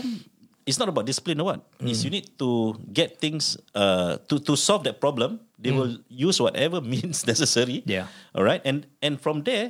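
No technical faults can be heard anywhere in the recording; the signal stays continuous and stable throughout.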